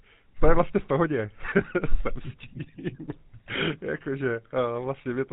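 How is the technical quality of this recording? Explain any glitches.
The quality is limited by one fault that runs through the whole clip. GSM full-rate codec damage, throughout: the speech is rebuilt from a vocal-tract model driven by sparse regular pulses, consistent with a 13 kbps phone codec, with nothing above 4 kHz. The result is a plainly buzzy, gravelly, muffled voice.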